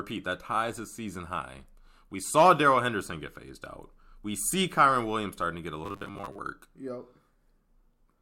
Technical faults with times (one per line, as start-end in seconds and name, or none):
5.84-6.38 robotic sound from repeated short buffers